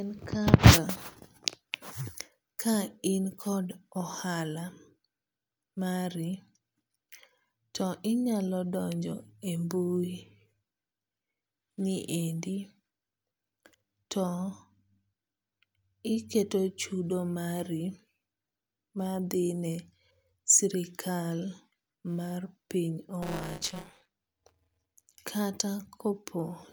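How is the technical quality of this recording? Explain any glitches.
One glitch stands out, near the end. From 23.22 to 25.06 s, buffer tearing adds a rattling 188 Hz buzz under the speech. The write and read positions overlap, leaving roughly 15% of each 256-sample-like buffer with audio about 20 ms stale.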